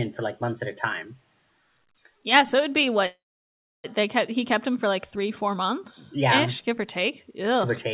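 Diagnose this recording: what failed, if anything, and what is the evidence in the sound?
After "yeah so it'd be" the speech breaks at 3.06 s into a short buzz, then 0.66 s of silence, resuming intact with "they kept he kept" at 3.86 s. This call audio freeze likely came from network-delayed packets draining the jitter buffer, which pushed everything after it 0.78 s late.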